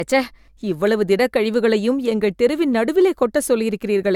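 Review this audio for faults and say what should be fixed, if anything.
Throughout the speech the sound is swirly, smeared and hollow, with softened consonant attacks and nothing above 17 kHz. This generation loss likely comes from repeated AAC-style encoding, perhaps about three passes, each on a shifted frame grid compounding quantisation noise. Prevent it by keeping a lossless master and encoding only once at the final stage.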